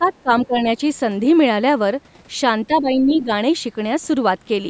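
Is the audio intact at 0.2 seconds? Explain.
No. From 0.0 to 0.3 s, the call's echo canceller likely mistook the talker for loudspeaker echo while both sides spoke at once. This is speech suppressed in double talk: the voice is pushed down by up to about 15 dB in broken patches totalling roughly 150 ms.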